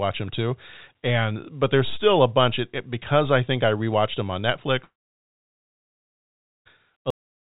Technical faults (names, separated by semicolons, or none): long network dropout; cut-off end